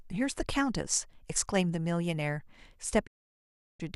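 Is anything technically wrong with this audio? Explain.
Yes, there's a digital broadcast dropout from about 3.05 to 3.81 s. The receiver stopped getting good frames and muted, so the speech fades out over about 20 ms and leaves a 720 ms hole. Whatever was said in that gap is simply gone.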